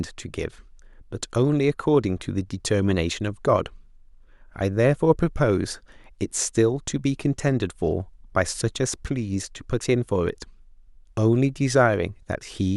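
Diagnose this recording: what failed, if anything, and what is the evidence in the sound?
Nothing failed; no fault is audible in the recording.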